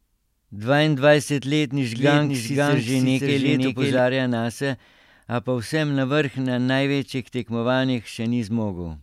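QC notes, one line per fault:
1.95–3.99 s doubled audio track: the speech repeats about half a second behind at roughly equal level, dry and full-band, likely a second capture path mixed in.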